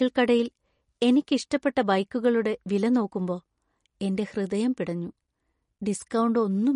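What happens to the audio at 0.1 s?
At 0.1 s you're already hearing the MP3 compression that runs through the whole clip. The speech has nothing above about 10.6 kHz, so the top end sounds dull, and there's a clearly audible watery, swirly quality. That fits an encoder starved of bits, likely around 40 kbps, cutting the treble at a fixed point and dropping weak frequency lines that flicker on and off between frames, which also blurs the sharp starts of sounds.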